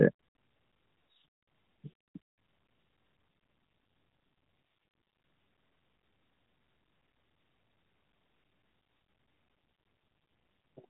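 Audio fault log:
3.28 to 5.20 s, AMR rate drop: speech turns buzzy and synthetic with no gap or band change, fitting a codec step from 12.2 to 4.75 kbps.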